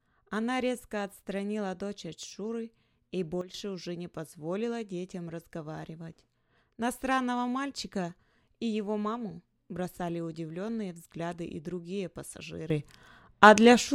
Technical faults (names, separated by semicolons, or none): sudden gain jump